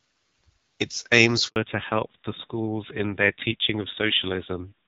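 A speech recording carried over a phone call, heard through the AMR wideband (HD Voice) codec with only light coding damage at first, which fits a 12.65 kbit/s rate. At 1.48 s a handover gap cuts the speech for 80 ms, until 1.56 s, while the call switches networks and no frames arrive. A waveform shows the signal collapsing to a flat line, and a spectrogram shows a blank vertical strip across all frequencies. From 1.56 s to the end, the call falls back to narrowband. Nothing remains above 4 kHz, so the voice sounds duller and rougher, which fits a low-rate narrowband codec around 5.9 kbit/s. On a spectrogram the upper band, which was filled up to about 7 kHz before the gap, is cut off flat at 4 kHz from that point onward.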